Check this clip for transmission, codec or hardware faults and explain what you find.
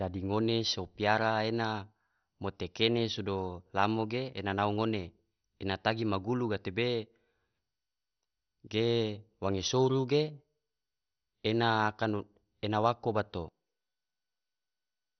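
One codec fault runs through the whole speech clip. Throughout, nothing survives above 6.1 kHz and the remaining bands sound dull and gurgling, likely heavy MP2 compression near 48 kbps starving upper sub-bands of bits.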